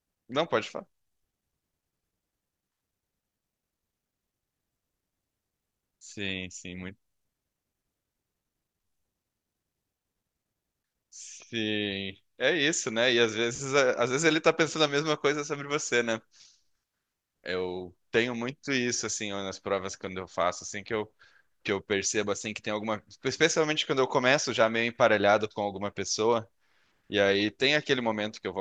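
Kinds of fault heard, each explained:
No faults found; the speech path carries no audible defect anywhere in the recording.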